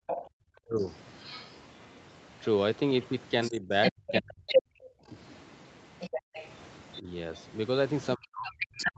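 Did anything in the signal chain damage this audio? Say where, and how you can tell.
Yes. The damage happens at the call-processing stage, in the echo canceller. The first fault is background gated by the echo canceller. The room sound drops out from 0.00 to 0.35 s, falling by about 38 dB. It drops again from 6.21 to 6.34 s, by about 40 dB. Each dip lasts only a fraction of a second. The canceller heard loudspeaker playback and clamped the microphone hard. The background returns once it releases.

The second fault is the other side's voice leaking through. A second voice sits under the main talker from 0.07 s to the end of the clip. It is only a few decibels quieter than the main talker. The likely cause is an echo canceller that did not fully subtract the loudspeaker signal from the microphone. What it missed passes straight into the sent audio.

The third fault is speech suppressed in double talk. 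The main voice sinks sharply from 0.63 to 0.82 s, by around 30 dB. It sinks again between 3.49 and 5.14 s, by around 35 dB, for about a second in total. From 7.01 s to the end it drops by up to roughly 40 dB. The likely cause is both sides speaking at once. The canceller could not separate them and turned everything down.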